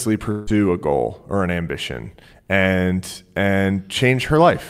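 From 0.31 to 0.50 s the speech turns into a fading buzz. This is likely a long network dropout. About 160 ms is lost before "a goal or an".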